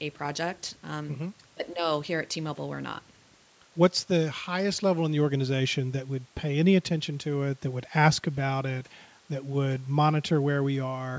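No technical faults can be heard in this speech, which has passed through a call's microphone processing with nothing above 8 kHz.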